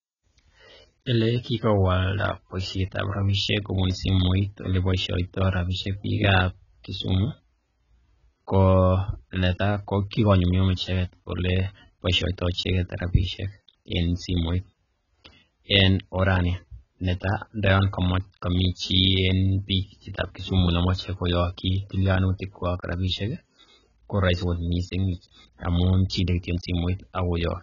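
Throughout, the speech sounds dull and smeared, with nothing above 7.1 kHz and fizzy, warbling sibilants: likely heavy AAC compression, fitting roughly 16 kbps.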